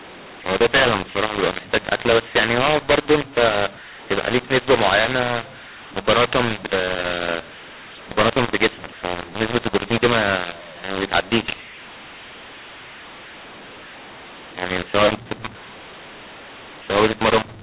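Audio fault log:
Throughout: mu-law and A-law mixed up. The speech was encoded with A-law but decoded as mu-law. Each sample's level is mapped wrongly, so loud parts distort harshly and quiet parts lose proportion. Pauses fill with a noise floor instead of silence, over the telephone band that stops at 4 kHz.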